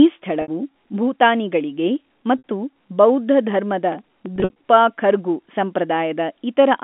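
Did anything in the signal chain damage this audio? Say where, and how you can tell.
Yes. Network stage: packet loss with pitch repetition at 0.42, 2.38 and 4.36–4.54 s. Gaps are filled with a held, buzzy repeated pitch period, not silent dropouts.

Driver or buffer stage: processor overload crackle, 3.92–4.26 s. A handful of tiny buffers, around a millisecond or two each, are skipped, giving gritty tearing rather than held tone.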